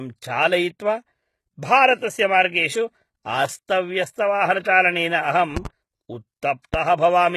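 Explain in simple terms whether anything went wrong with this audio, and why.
The speech was most likely squeezed by HE-AAC compression, which rebuilds the treble from lower tones. Throughout, the top end sounds heavily damaged, with nothing above 12.3 kHz.

A likely electrical glitch then adds loud pops, clearly louder than the speech: two quick pops between 5.57 and 5.68 seconds, then one more at 6.74 seconds.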